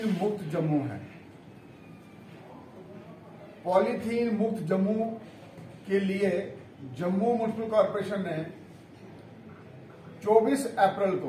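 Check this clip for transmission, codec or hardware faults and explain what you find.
Nothing wrong turns up anywhere in this recording.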